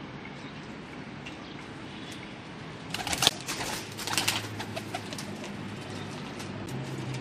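Two CD skips, at 3.29 s and 6.66 s: each is a tick and brief mute before the audio resumes elsewhere on the disc, seen as a thin vertical gap with a waveform discontinuity.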